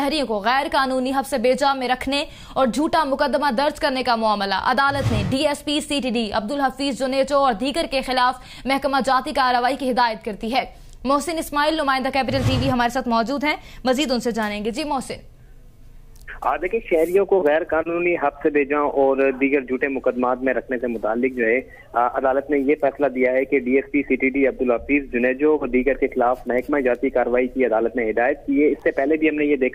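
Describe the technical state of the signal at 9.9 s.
At 9.9 s the signal is intact, with no dropout, distortion, glitch or other fault to be heard.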